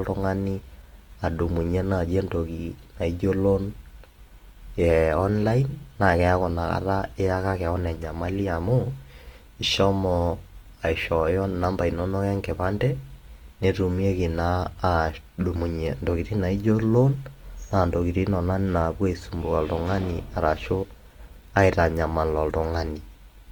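Throughout the speech, Opus compression is plainly audible, likely from encoding at a low bitrate in the music-oriented CELT mode, with the damage level fitting something near 24 kbps. The encoder preserves each band's energy but, short of bits, fills band detail with folded or noise-like content, so the voice takes on a grainy, rough texture instead of sounding clean. Bandwidth stays full, with content reaching about 20.1 kHz, so there is no muffling.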